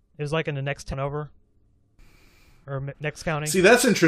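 At 0.92 to 0.94 s, right after "like in the next", damaged data in the compressed stream leaves the decoder misreading the corrupted bytes and losing frame sync until it finds the next valid header. The speech breaks into a brief glitch lasting about 20 ms.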